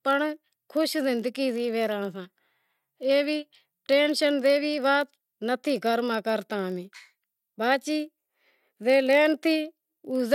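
Speech, with a block size mismatch (padded) throughout. Tiny zero-filled gaps produce a steady 46.9 Hz buzz, which fits 1024-sample read blocks. Timing slows only slightly, to 0.999 times normal speed.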